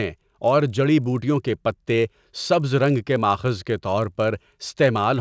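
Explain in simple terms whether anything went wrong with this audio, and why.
A resampler restarted on every block runs through the whole speech clip. The sound was converted from 24 kHz to 16 kHz in short 20 ms pieces, each handled on its own, so the converter never saw the neighbouring sound at either end of a piece. Each seam gets a small error, and with seams arriving 50 times a second these run together into a buzz at 50 Hz that rides along with the voice.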